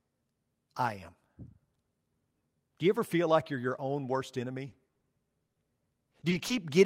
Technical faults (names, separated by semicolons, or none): repeated packet loss (robotic sound); short concealed packet loss; short stall from a late packet